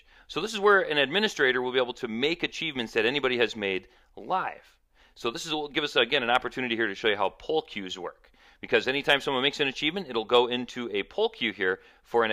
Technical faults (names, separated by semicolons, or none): none